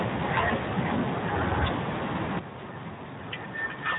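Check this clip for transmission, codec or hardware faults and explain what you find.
Two faults are present: speech coding damage from the Speex codec across the whole clip, and a sudden gain jump late in the clip.

The Speex codec damage runs from start to finish and is plainly audible. The codec models speech by predicting its spectral envelope and spending a limited bit budget on the excitation. At a rate that fits about 11 kbps, that excitation is coarse, so the speech comes out noisy and hoarse. The content stops at 3.8 kHz. On a spectrogram, energy ends sharply at that line with nothing above it, and the harmonics below look smeared and grainy.

The sudden gain jump happens at 2.39 s. The level drops by about 10 dB from one sample to the next and stays down to the end. The likely cause is a gain setting or bit shift applied without a ramp. Speech and background noise fall together, so the drop is heard as an abrupt step down in loudness rather than a fade. 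On the waveform, the envelope shrinks to roughly a third of its height at a single vertical edge.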